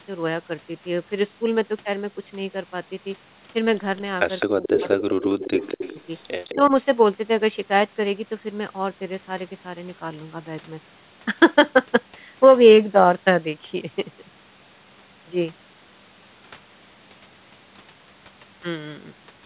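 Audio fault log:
4.40–4.46 s, 4.63–5.93 s and 6.45–6.53 s: echo leak. A delayed copy of the speech trails it by 210 ms, about 10 dB below the voice in the first two spans and about 20 dB below in the last. The likely cause is loudspeaker pickup that the echo canceller did not fully remove and sent back.
4.46–5.99 s and 6.53–6.73 s: speech suppressed in double talk. The voice drops by up to roughly 15 dB in pieces, for about a second in the first span, while the echo overlaps it. The likely cause is an echo canceller that could not separate talker from echo and attenuated both.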